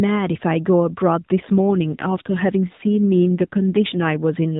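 From 1.42 s to 4.17 s, an AMR rate drop makes the speech buzzier and more synthetic, which points to a step down from 12.2 to about 5.9 kbps. A spectrogram shows coarser, smeared harmonics, still cut off at 4 kHz by the narrowband mobile codec.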